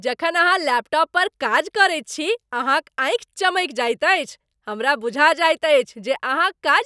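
A speech recording with nothing technically wrong with it.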